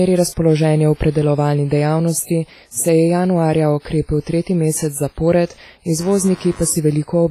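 Speech, likely passed through a low-bitrate WMA compression stage consistent with about 24 kbps, carries heavy codec damage throughout: washy, ringing quantisation noise, breathing hiss, and nothing above 15.3 kHz. From 5.97 s to the end, computer activity noise, where processor or peripheral load disturbs the shared audio ground, adds a buzz pulsing at around 100 Hz, roughly 25 dB below the speech.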